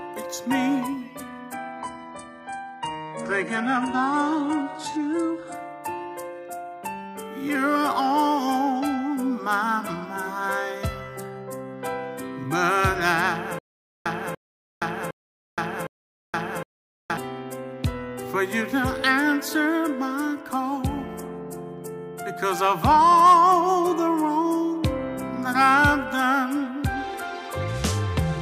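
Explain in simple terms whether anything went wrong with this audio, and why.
Two things go wrong. The first is an adaptive stream at a lower bitrate, from 1.54 to 5.54 s. For those four seconds the sound suddenly gets duller. Nothing above about 11.4 kHz remains, so the crisp top end is missing. There is no gap when it switches. This happens when a streaming player drops to a cheaper, smaller version of the audio to keep going on a slow connection.

The second is a stutter with silent gaps, from 13.59 to 17.17 s. A short burst of about 0.29 s plays, then dead silence for about 0.47 s. This repeats every 0.76 s, four times in a row. It sounds like a skipping record with pauses. The likely cause is the player stalling and replaying its last scrap of audio each time it retries. The audio that should have played there is lost.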